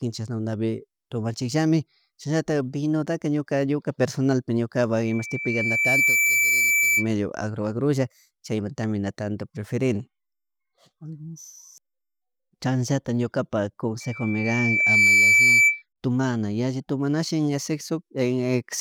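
Loudspeaker feedback squeal appears from 5.04 to 7.09 s and again from 14.00 to 15.83 s, both times as a single tone near 2.3 kHz. The microphone is picking up the loudspeaker it drives, and at that frequency the loop gain exceeds one, so the tone feeds on itself. Each squeal swells over about a second. The first rises to about 5 dB above the speech, and the second grows louder, to about 10 dB above it.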